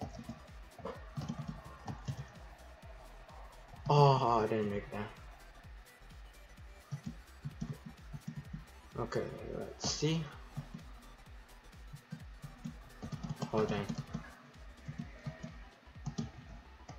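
No technical faults can be heard anywhere in the clip. Nothing in the audio points to a problem in how it was captured, carried or played back.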